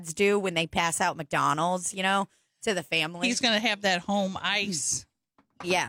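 No technical faults can be heard anywhere in the speech recording.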